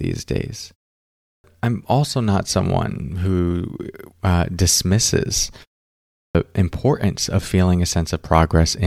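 At 1.13 s and again at 6.06 s there's a clipped start after a pause: after roughly half-second gaps the output device seems to doze off, swallowing about 310 ms before "I'm also not someone" and 290 ms after "uh dismisses", so speech lurches in abruptly.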